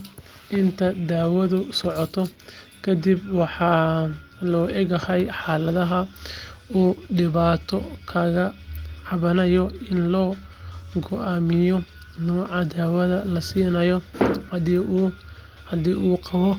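Listening through the speech recording, nothing technically amiss stood out at any point.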